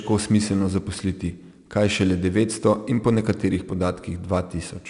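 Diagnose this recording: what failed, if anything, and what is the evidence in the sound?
Codec stage: 4-bit ADPCM compression, throughout. Louder speech carries a gritty hiss that follows its level, onsets rasp, and nothing sits above 10.6 kHz, which points to about 89 kbps. Each sample is a coarse 4-bit step from a prediction, and that step lags on sharp attacks.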